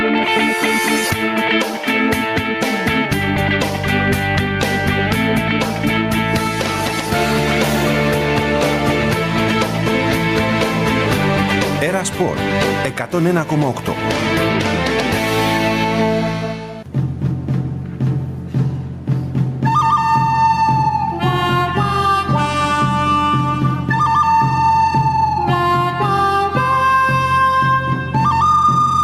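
From start to finish the sound shows gain pumping. The gain is pulled down each time a loud sound arrives, a swing of around 15 dB, and the loud and quiet parts sit unnaturally close in level. The likely cause is input gain set far too high with a fast limiter or compressor clamping every peak. Unlike a noise gate, which chops the background to silence, this fault turns the gain down on loud sounds rather than muting the gaps.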